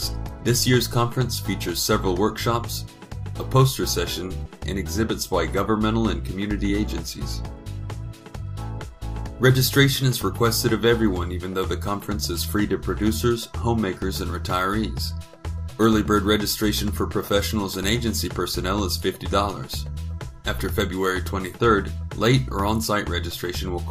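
At 4.45 s there is a skip ahead: roughly 0.4 s of audio never reaches playback, either lost in transit or discarded by an overflowing jitter buffer while later material was already queued. The two sides of the missing stretch are butted together with no silence or fill, so the sound lurches forward abruptly. Unlike a dropout, there is no gap to hear, only a missing piece and a sudden discontinuity.

From 7.13 s to 8.43 s comes a jitter buffer speed-up. The buffer was holding more audio than its target, so the receiver trimmed many short pitch-period-sized pieces in succession, about 70 ms in total, to bring the delay back down. Playback runs at roughly 105% speed and sounds slightly hurried, yet the pitch stays where it was. The shortening is spread over the stretch instead of arriving in one jump, which sets it apart from the earlier skip.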